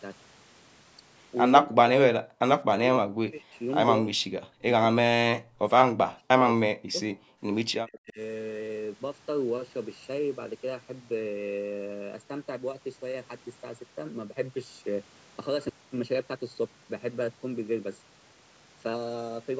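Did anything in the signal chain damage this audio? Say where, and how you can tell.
Yes. A channel delay (comb filtering) runs through the whole clip. The speech sounds hollow and phasey, with fixed notches starting near 700 Hz and repeating at even spacing. That fits one channel arriving about 0.7 ms late before a mono sum at the driver or buffer stage. Codec dulling would shift over time, but these notches stay put.

The speech itself is pulled down at 1.63–1.79, 2.11–2.28, 2.66–3.55, 3.99–6.98 and 7.66–8.19 s. The drops are about 30 dB in the first stretch and about 40 dB in the rest. That points to call processing, likely speech suppressed in double talk, not packet loss.

From 7.26 to 7.38 s the background is gated by the echo canceller. The room sound falls about 38 dB for roughly 100 ms and then comes back. Unlike the double-talk dips, it is the ambience rather than the speech that vanishes, which marks the canceller clamping the microphone during loudspeaker playback.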